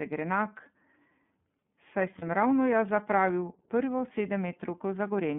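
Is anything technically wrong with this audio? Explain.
Yes. The whole clip carries iLBC codec damage. The speech sits in a band of about 150 Hz to 3.5 kHz and sounds plainly rough and synthetic, which fits iLBC's 30 ms frame mode.

From 2.18 to 2.23 s there are lost iLBC frames. The decoder repeats the last pitch cycle with noise, which points to a single lost 30 ms frame. It sounds like a brief buzzy held vowel, and clarity returns almost immediately.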